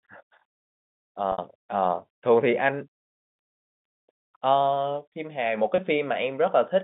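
It's a speech clip carried over a G.711 telephone-band line, and the problem is packet loss with pitch repetition in two spots. From 1.32 to 1.38 s about 60 ms goes missing, which fits three 20 ms packets, and the receiver fills the hole by looping the last pitch period, so you hear a brief buzzy hold before it fades. At 5.76 to 5.78 s a single 20 ms gap gets the same treatment and comes across as a tiny held note.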